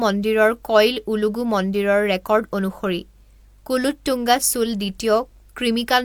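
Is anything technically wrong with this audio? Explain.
No, nothing is technically wrong with this audio.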